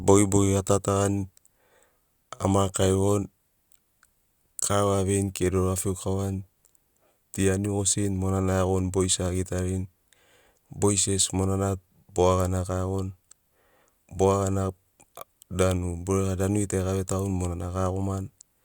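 No technical faults are audible.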